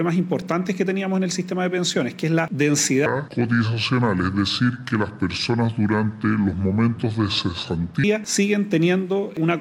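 From 3.06 s to 8.04 s the sound turns deep and sluggish, dropping roughly seven semitones and running at 0.689 times its proper speed before snapping back. This section at the wrong speed likely comes from being played or edited against a mismatched clock.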